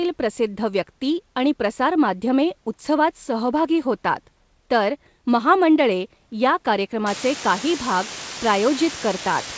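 A speech recording, band-limited to 8 kHz by wideband call coding consistent with G.722, in which the word length collapses from 7.06 s to the end at 9.57 s. The low bit depth with dither, which fits roughly 4 bits, turns rounding error into a steady, even hiss only about ten decibels below the speech, without audible distortion.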